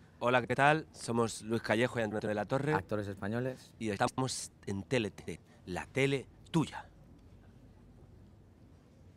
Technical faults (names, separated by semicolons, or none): frames out of order